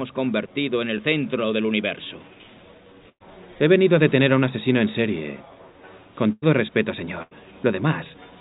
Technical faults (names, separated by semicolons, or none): short concealed packet loss; burst of packet loss